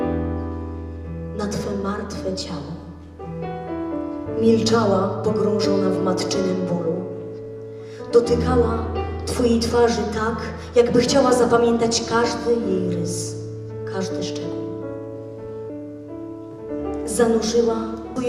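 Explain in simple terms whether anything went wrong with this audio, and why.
Two brief blips are heard, at 15.70 and 18.16 seconds. This is damaged data in a compressed stream. Corrupted bytes made the decoder briefly lose its place.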